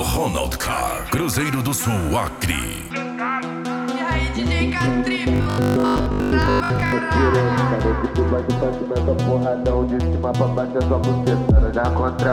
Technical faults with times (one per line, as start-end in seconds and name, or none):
5.36-6.92 robotic sound from repeated short buffers